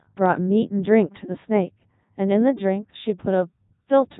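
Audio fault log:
Throughout, Codec 2 vocoder: speech rebuilt from sine waves turns heavily robotic and buzzy, with nothing above 3.8 kHz; unlike mere band-limiting, the waveform itself is gone.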